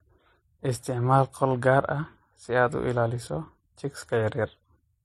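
From start to finish the speech carries the mixed smear of transcoding between lossy codecs, most likely a low-rate MP3 around 36 kbit/s re-encoded to HE-AAC near 32 kbit/s. You hear dull, capped highs, swirly watery artefacts and a metallic, synthetic sheen layered together.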